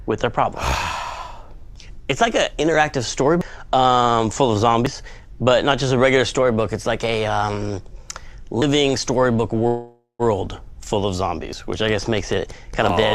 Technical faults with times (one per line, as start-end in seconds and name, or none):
3.41 dropped buffer (overrun)
4.86 dropped buffer (overrun)
8.62 dropped buffer (overrun)
9.67-10.22 call audio freeze
11.53 dropped buffer (overrun)
12.89 dropped buffer (overrun)